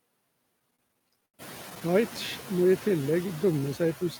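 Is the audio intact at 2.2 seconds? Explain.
No, not quite. Right around 2.17 s there's a repeated buffer: fresh audio didn't reach the device in time, so it played its last block over again, once, which fits a 512-sample buffer about 10.7 ms long. Since the repeat is so short, it comes across as a quick click or a tiny buzzy tick, with hard joins on either side, rather than a real stutter. Essentially nothing goes missing; it's just a small piece doubled.

On top of that, the noise suppressor artifacts that run through the whole clip are there at this moment too. The suppressor pulls down whatever bands it reads as steady noise, by about 20 dB, frame by frame. That leaves the room noise, which by this point has already come up around 1.5 s, pumping: it dips in the gaps and swells back under the speech.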